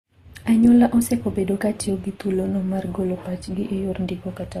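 Throughout the speech, nothing is heard above 14.2 kHz, and two kinds of compression artefact sound at once. The likely cause is transcoding between lossy codecs. It fits an Opus encode re-encoded as Vorbis, with the second codec wasting bits on the first one's damage.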